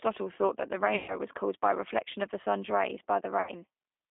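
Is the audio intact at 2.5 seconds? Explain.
No. At 2.5 seconds you're hearing the same G.729 codec damage that runs through the whole clip. The speech is being rebuilt at 8 kbit/s from a vocal-tract filter, a pitch predictor and a handful of pulses per frame, not carried as a waveform. So it sounds plainly rough and a bit synthetic, and it's squeezed into a phone-line band of roughly 250 Hz to 3.6 kHz, with no lows or top end.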